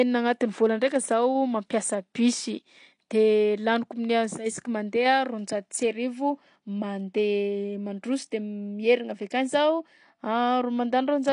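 Throughout the speech, the top end stops dead at 10 kHz, leaving the sound dull and smeared, with a warbling, fizzy edge on sibilants and held vowels. This is likely AAC compression, AAC-LC at a rate that fits about 32 kbps, discarding and coarsely quantising high-frequency detail.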